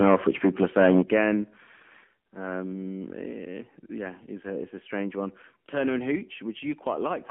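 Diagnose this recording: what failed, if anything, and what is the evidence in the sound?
The whole clip sounds boxed-in and buzzy, with a thin, synthetic edge on the speech. Nothing reaches above the phone band of roughly 200 Hz to 3.4 kHz, so sibilants lose their air. This is AMR narrowband mobile codec damage at the codec stage. AMR-NB rebuilds speech from a vocal-tract filter driven by sparse pulses within each 20 ms frame, and the degree of artificial buzz fits its low 7.4 kbps mode.

From 0.0 to 1.22 s the loudest syllables carry a harsh, crackling edge, as if their peaks were flattened. That points to microphone overload at the analogue-to-converter stage. The input was likely driven about 7 dB past full scale, so the tops of the waveform were sheared off, with a few percent of samples pinned at the limit. The added distortion components give those opening syllables their rough crackle.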